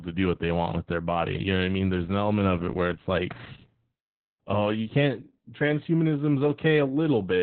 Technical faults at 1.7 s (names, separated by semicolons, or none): Opus voice compression